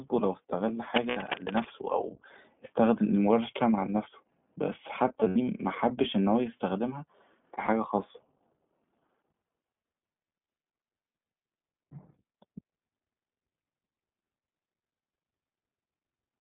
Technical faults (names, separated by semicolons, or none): iLBC codec; cable scratch noise; lost iLBC frames